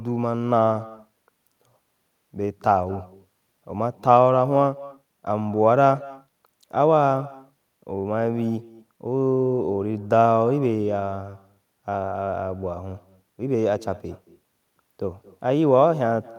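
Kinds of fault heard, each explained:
Echo with no canceller: throughout the speech, every phrase is trailed about a fifth of a second later by a faint, thin copy, about 20 dB down. The far end's loudspeaker feeds its microphone, and nothing strips that return before it travels back.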